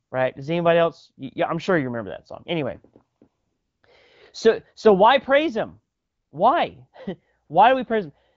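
The sending phone's voice activity detection judged the talker silent and stopped sending speech frames, so the receiver filled the gaps with AMR comfort noise: synthetic noise from a coarse level and spectrum description. This happens at 0.03–0.11 s, 3.17–3.21 s, 3.27–3.83 s, 5.95–6.31 s and 7.45–7.49 s. In each gap the real background gives way to a steady, smooth hiss that switches in and out abruptly. Around the AMR wideband speech, which sounds clear with light coding damage, it fits a rate near 12.65 kbit/s.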